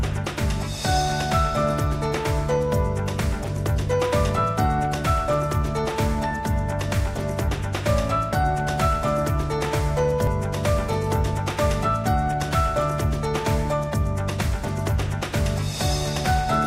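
At 10.27 s, about 20 ms of audio is missing between chunks, likely from a 6-second chunk handover, heard as a skip. The waveform shows an abrupt, gapless join.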